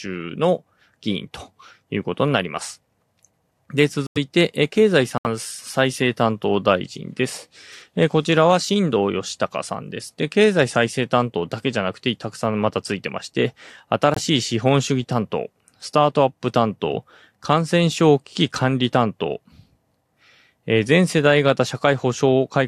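Bit errors in the compressed stream made the decoder reject frames, and the player filled each gap with silence, a corrupt frame muted fault. The speech cuts abruptly to nothing at 4.07–4.18 s, 5.18–5.27 s and 14.14–14.19 s, holes that fit whole frame lengths, while the timing carries on unchanged.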